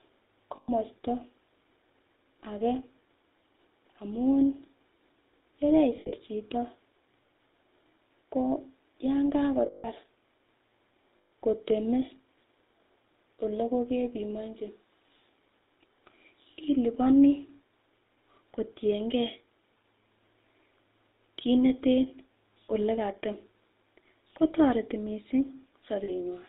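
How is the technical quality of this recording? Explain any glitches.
The recording has plainly audible codec damage throughout, plus five brief dropouts where the sound turns to a metallic ring.

Throughout the 26-second speech clip, the sound is buzzy and gravelly, with nothing above 4 kHz. This is the GSM full-rate codec, which fits 13 kbps. It rebuilds the vocal tract from a filter driven by sparse, regularly spaced pulses, so the fine detail of the original sound is lost.

Lost GSM frames occur at 0.56–0.70 s, 5.96–6.13 s, 9.66–9.87 s, 11.18–11.33 s and 26.04–26.10 s. At each, the sound freezes into a rough, metallic ring. The decoder replays the last good frame's settings to cover each gap. The gaps last 120, 120, 180, 140 and 40 ms. At 5.96 s the losses are scattered over 160 ms, with the longest run about 70 ms.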